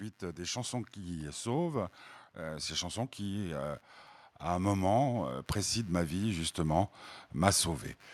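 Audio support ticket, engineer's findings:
Computer activity noise, whole clip. Low buzz pulsing at around 100 Hz, roughly 35 dB below the speech. Probable component: shared ground between PC and audio interface. Processor, graphics or mouse load shifts ground potential into the signal path. Follows machine activity, not the speech. Check grounding and isolation.

Automatic gain rising, 0.36 to 3.89 s. Speech and background swell together by about 6 dB before "à un". Probable component: AGC stage. It judged the input too quiet and ramped gain slowly.

Automatic gain rising again, 4.58 to 6.98 s, starting after "à un". Level climbs about 5 dB, noise floor lifting with speech. Same AGC behaviour. Recommend disabling AGC or fixing input gain.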